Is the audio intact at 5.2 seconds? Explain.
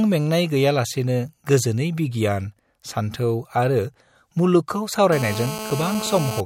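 No. A GSM phone buzz runs from 5.12 to 6.41 s. A nearby 2G handset on a call pulses its transmitter 217 times a second, and the audio circuitry rectifies those bursts into a steady, raspy 217 Hz buzz rich in harmonics, about 9 dB below the speech.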